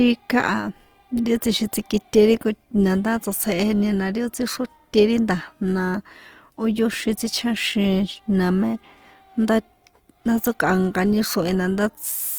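Speech with Opus compression throughout: the audio stays fullband up to about 20.2 kHz, yet it sounds noisy, rough and grainy. That is likely Opus's music (CELT) mode at a low rate, which fits roughly 24 kbps, and it swirls less than MP3, leaving few of its hollow holes.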